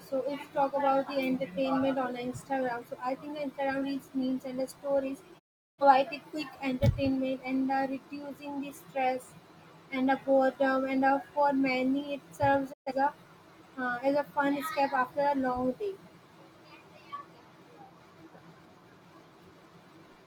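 At 5.38 to 5.83 s and again at 12.72 to 12.92 s the speech falls into a digital broadcast dropout. The receiver mutes with a quick 20 ms fade after losing frames of roughly 43 ms each. The clean silence, with no hiss or smeared concealment, marks it apart from analogue fading or packet-loss patching.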